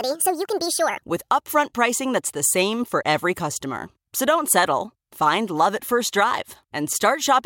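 From 0.00 to 1.02 s, the speech plays as a section at the wrong speed. It runs 1.58 times too fast, which raises the pitch by around seven semitones. The voice sounds high and hurried. A wrong playback clock is the likely cause. Correct speed returns at "with upfront pricing that's".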